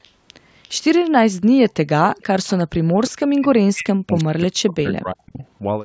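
An echo canceller on a loudspeaker side likely let part of the far-end signal through, so faint echo leak, delayed by about 0.35 s and roughly 25 to 35 dB below the speech, surfaces at 0.03–0.1 s, 0.63–0.69 s, 2.12–2.23 s and 2.47–2.6 s. From 2.87 to 5.41 s, both sides likely talked at once and the canceller turned the near talker down too; this speech suppressed in double talk makes the voice dip and drop out in pieces, by up to roughly 40 dB, over about two seconds in total. At 5.4–5.44 s, one last, very faint scrap of the same delayed echo slips through.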